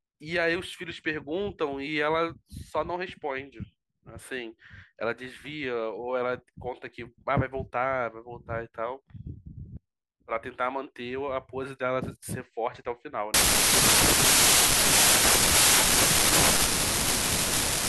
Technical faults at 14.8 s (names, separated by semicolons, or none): wrong sample width